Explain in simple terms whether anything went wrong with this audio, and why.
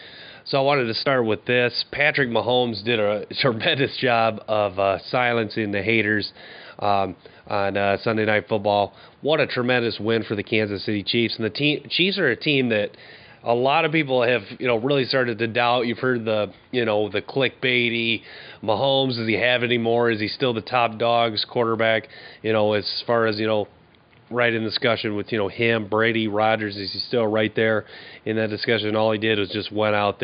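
Nothing went wrong here.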